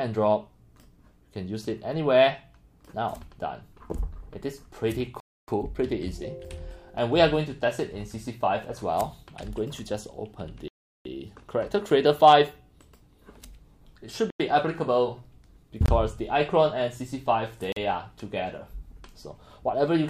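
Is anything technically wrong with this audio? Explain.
Yes. The audio has five blocks of digital silence: 5.20 to 5.48 s (about 279 ms), 10.68 to 11.05 s (about 372 ms, which fits a 16384-sample buffer), 14.30 to 14.40 s (about 93 ms, fitting 4096 samples), 15.86 to 15.88 s (24 ms) and 17.72 to 17.76 s (41 ms). Each time, a run of samples went to zero, likely because the output buffer wasn't filled in time. The sound stops and restarts abruptly. The longer gaps are audible holes. On a waveform these are near-flat lines. On a spectrogram they are dark vertical bands.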